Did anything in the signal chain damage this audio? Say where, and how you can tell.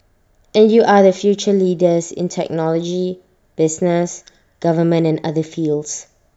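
No, no stage of the signal chain left audible damage on this speech recording. I hear nothing to trace back to the wiring, converter, buffering, processing, transmission, storage or playback stages.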